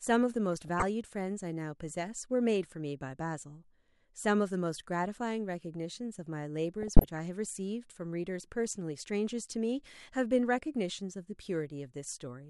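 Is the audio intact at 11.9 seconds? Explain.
Yes, at 11.9 seconds the audio is intact, with nothing audibly wrong at that point.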